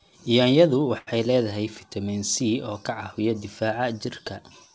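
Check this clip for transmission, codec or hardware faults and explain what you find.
One transmission fault is audible in the speech, heard through a call path whose sound stops at 8 kHz, which fits G.722.

Short stall from a late packet, 0.98 to 1.09 s: a packet arrived late, the jitter buffer emptied, and the receiver stretched the last sound for about 90 ms before resuming right before "leedahay fitamiin". Nothing is lost, but the sound holds too long with a slight buzz or dip.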